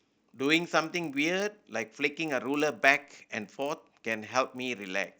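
Throughout the speech there is a steady 50 Hz buzz, the mark of a resampler restarted on every block. Each 20 ms block, in what sounds like a 16 kHz to 48 kHz conversion, was handled alone, leaving an error at every edge. Unlike mains hum, it stops in pauses.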